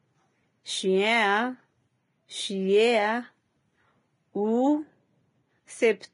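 From start to finish the speech carries a grainy, hissy texture, and nothing reaches above 10.5 kHz. That pattern is most likely Vorbis compression pushed hard, at a bitrate down around 27 kbps. At that setting the encoder trims the top band and quantises what treble remains so coarsely that the fine detail turns into a noise-like wash. Voiced tones sound roughened, and the attacks of consonants are smeared rather than crisp.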